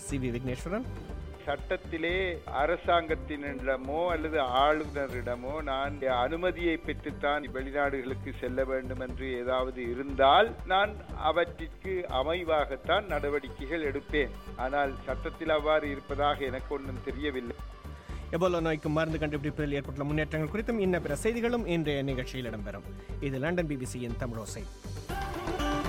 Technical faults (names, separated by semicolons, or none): bit error spike